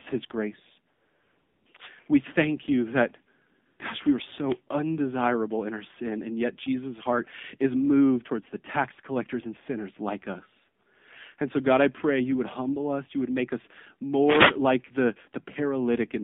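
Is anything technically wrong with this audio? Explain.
Yes, two faults are present.

The AMR narrowband mobile codec runs through the whole clip. The speech passes only from about 150 Hz to 3.6 kHz, and the codec damage is plainly audible: voiced sounds come out buzzy and synthetic. That points to a low-rate mode, something like 7.4 kbps. At that rate the encoder rebuilds the voice from a vocal-tract model excited by only a few pulses per subframe, so fine detail is lost. A plain band-limit would leave the voice natural but muffled. This artificial, buzzy texture is what marks it as a codec.

AMR comfort noise fills three pauses. The first runs from 0.94 to 1.66 s, just after "his grace". The second runs from 3.66 to 3.80 s, after "thank you that". A brief one comes at 10.84 s, after "and sinners like us". In each gap the phone judged the talker silent and stopped sending speech frames. 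The receiver then played synthetic noise built from a rough level and spectrum description. The real room tone gives way to a smooth, steady hiss that switches on and off. A dropout would leave dead silence instead, and a noise gate would leave nothing at all.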